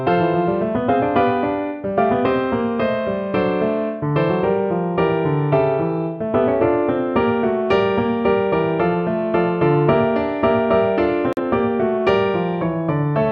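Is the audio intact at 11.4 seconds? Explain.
No. The sound drops to silence from 11.33 to 11.39 s, a hole of about 66 ms, with about 43 ms of audio lost, that ends right at 11.4 s. This is a digital broadcast dropout: the receiver muted while its data was missing or corrupt, which fits a single lost frame. That stretch of audio is gone.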